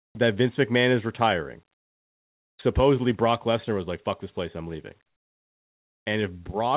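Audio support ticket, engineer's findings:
0.00–0.15 s: background swapped for steady, featureless noise, about 27 dB lower. Likely comfort noise in place of the background, sender DTX during silence. Band-limited to 4 kHz, fitting G.711.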